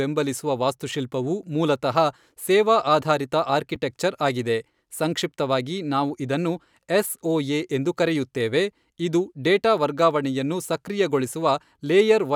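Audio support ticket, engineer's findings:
Chunks out of order at 2.30 s and 3.75 s in speech: brief jumbled moment, one 5.33 ms chunk played one late. Unlike dropouts, nothing is missing.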